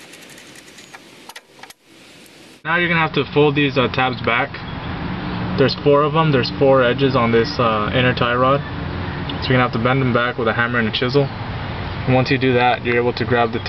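No technical faults can be heard anywhere in this audio. At no moment does anything in the sound stand out as a defect.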